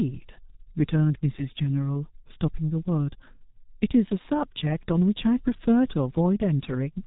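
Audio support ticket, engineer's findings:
Whole clip, start to end: path running through a G.723.1 codec, heavy damage, sound consistent with its higher-rate mode of roughly 6.3 kbit/s. 30 ms frames, slow-updating voice model, nothing passed above 4 kHz. Result: muffled, hoarse speech, consonants smeared between frames. Probable component: G.723.1 codec stage.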